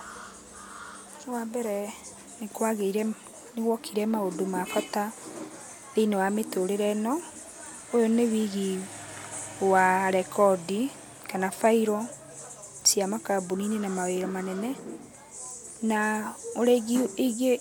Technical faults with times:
none

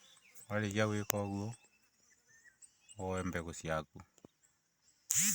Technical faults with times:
none

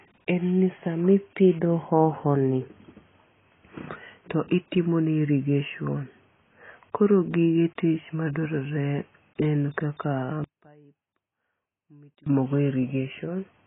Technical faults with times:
0.00-13.66 AAC compression
10.44-12.26 one channel inverted

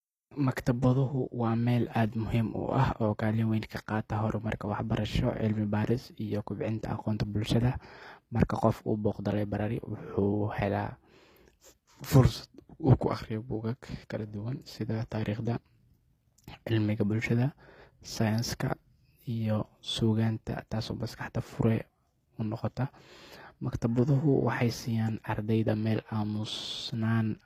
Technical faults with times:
0.00-27.45 HE-AAC compression

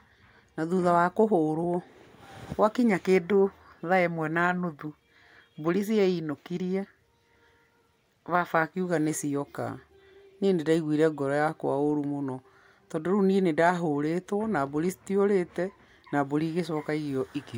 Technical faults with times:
none

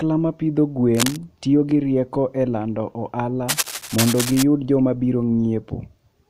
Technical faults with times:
0.94-1.16 cable scratch noise
3.48-4.43 cable scratch noise

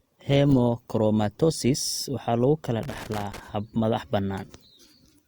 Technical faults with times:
2.83-3.40 loose connector crackle

